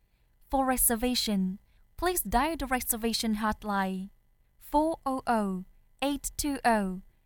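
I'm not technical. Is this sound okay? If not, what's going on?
Yes, nothing wrong can be heard anywhere in this audio, so there is nothing to fix.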